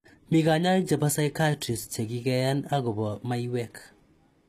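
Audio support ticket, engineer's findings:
Treble gritty and metallic throughout, s sounds lispy, nothing above 14.9 kHz. Likely HE-AAC compression at a low bitrate near 24 kbps, rebuilding highs from copied lower bands.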